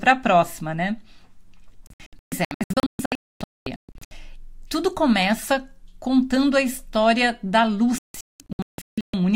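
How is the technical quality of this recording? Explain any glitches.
The quality is marred by two digital broadcast dropouts. From 1.87 to 4.12 s and again from 7.98 to 9.14 s, the receiver lost or rejected frames and muted. The speech breaks into repeated short holes, up to 256 ms and 192 ms long, which show as blank vertical gaps in the spectrogram and a flat waveform.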